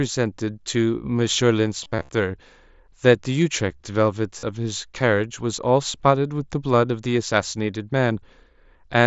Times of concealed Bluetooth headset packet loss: 1.83-2.09, 4.39-4.43

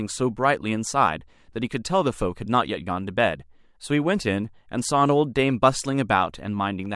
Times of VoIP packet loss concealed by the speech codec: none

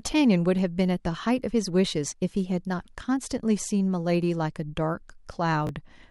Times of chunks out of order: 5.67-5.69

